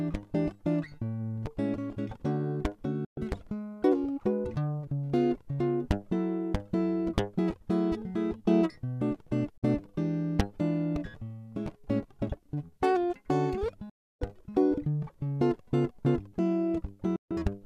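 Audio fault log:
3.05 s, 9.58 s, 13.90 s, 17.16 s: digital broadcast dropout. The music fades out within about 3 ms and goes silent for 0.13, 0.06, 0.32 and 0.15 s while the receiver mutes bad frames. The hole lengths fit whole 24 ms frames, and the missing music is lost.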